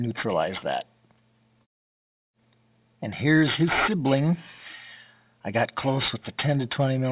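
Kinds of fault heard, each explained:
Aliasing: throughout the clip, content above 4 kHz folds back below that edge as gritty, metallic tones at unrelated pitches, roughly 10 dB below the main sound. This fits a rate reduction to 8 kHz without an anti-aliasing filter first.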